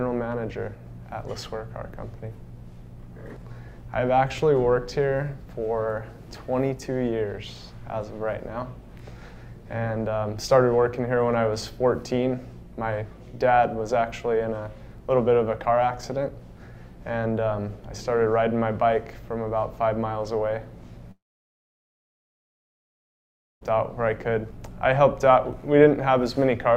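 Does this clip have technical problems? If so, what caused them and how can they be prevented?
Yes: a long network dropout from 21.11 to 23.63 s, likely lost packets. A brief fading buzz gives way to about 2.4 s of silence, and 2.5 s never returns. A steadier connection with deeper jitter buffering would prevent it.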